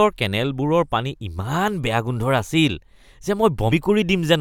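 Compressed frames skipped at 3.69 to 3.72 s: whole frames of the encoded speech never reach playback, so the audio jumps forward by roughly 40 ms.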